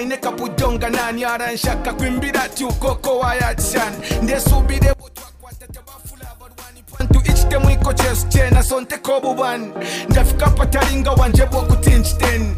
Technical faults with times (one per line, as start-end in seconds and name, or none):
4.93-7.00 one channel inverted